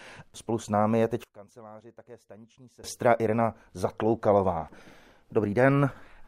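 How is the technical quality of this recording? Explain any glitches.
The recording has one clear fault, a sudden gain jump. From 1.24 s, right after "s námi je teď", the level drops abruptly by about 24 dB and stays down until 2.84 s, then returns just as abruptly. The speech and the background noise fall and rise together, which marks it as a gain change rather than a dropout or a compressor ducking, and there is no gradual fade at either edge. The likely cause is a digital gain setting applied instantly without a ramp.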